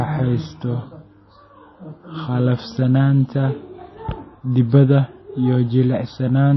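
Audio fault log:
Throughout: MP3 compression, likely the cause. Nothing is heard above about 5.8 kHz, so the speech sounds dull and the s sounds lose their edge. The encoder had too few bits and dropped the treble at a fixed point. Codec damage is plainly audible in the band that remains. Weak frequency lines seem to flicker on and off between frames, giving a watery, swirling texture. This fits a low bitrate near 24 kbps.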